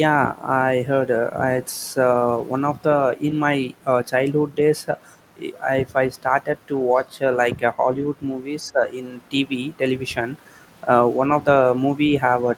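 Speech suppressed in double talk, 8.62 to 8.81 s: level dips about 10 dB, likely an echo canceller ducking the talker while both sides spoke.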